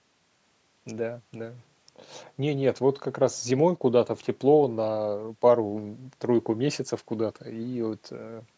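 At 3.76 s the speech abruptly drops by about 6 dB for roughly 50 ms, returning at 3.81 s as a brief dip. One channel dropping out is the likely cause. The waveform envelope steps down and back squarely, and the spectrogram shows a thin, evenly dimmed vertical strip.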